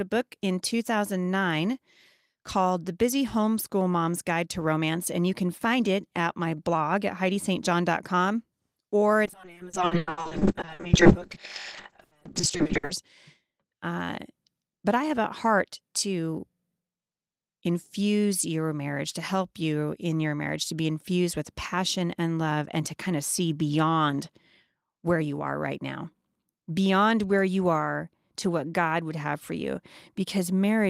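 From 9.27 s to 13.03 s there is a call bitrate drop. The encoder's bit budget collapsed, consistent with a fall from 32 kbps to around 6 kbps, held for about 3.65 s. The speech turns coarse and watery, with its highs stripped away, before clarity returns.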